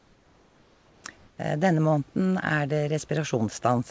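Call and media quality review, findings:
Comfort noise in place of the background at 0.00–1.04 s (about 3 dB quieter) and 1.18–1.38 s: flat, featureless hiss replaces real room noise, likely DTX silence suppression on the sender.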